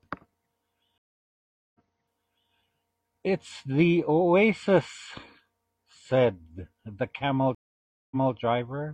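At 0.98 s and 7.55 s, stream reconnects occur. The connection dropped and decoding restarted. Silences last 0.76 s and 0.56 s. The speech then repeats, resuming 0.79 s and 0.23 s earlier.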